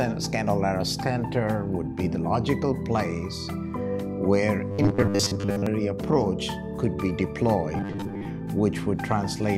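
New audio was likely arriving too slowly, so playback kept looping its last 10 ms, producing robotic sound from repeated short buffers at 4.72–5.67 s, where most of the sound is replaced, and at 7.77–8.25 s, about half replaced. Both carry a rigid, metallic 100 Hz buzz.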